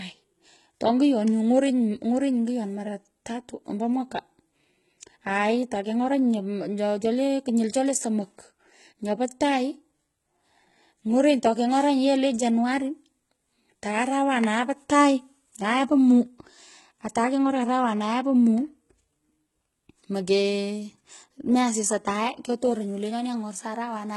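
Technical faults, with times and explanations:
Throughout, HE-AAC compression: s sounds turn gritty and lispy, the treble is synthetic, and nothing remains above 11.8 kHz. The cause is likely heavy HE-AAC v2 coding near 16 kbps, which rebuilds treble from copied lower bands, so harmonics misalign across the crossover.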